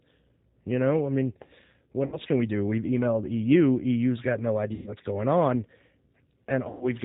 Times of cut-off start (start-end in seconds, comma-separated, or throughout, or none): none